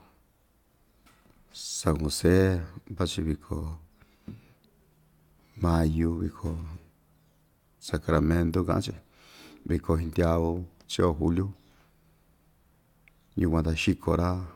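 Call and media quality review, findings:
No technical defects found in the speech signal; level, continuity and timing are consistent throughout, so no component is implicated and no action is required.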